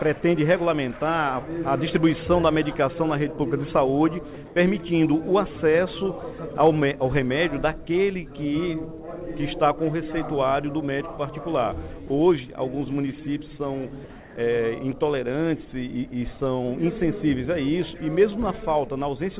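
At 4.46 s the background turns flat and featureless for 100 ms, about 2 dB quieter than the surrounding ambience. This is comfort noise in place of the background. The sender most likely paused transmission on hearing only background, which sits about 21 dB below the loudest sound, and the receiver filled the gap with a synthetic noise roughly matched to it.

At 12.08 s a 20 ms slice of sound briefly vanishes into steady noise before the audio picks up again. This is sound dropped by the voice detector: the sender likely mistook that moment for background and stopped sending, so the receiver played comfort noise where real sound should have been.

From 14.2 to 14.36 s the same featureless texture returns, this time about 3 dB quieter, over a background about 22 dB below the loudest sound. This is a second instance of comfort noise standing in for the real background, likely during a pause in transmission. 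Throughout, nothing above 4 kHz comes through, which fits a narrowband call codec such as G.711.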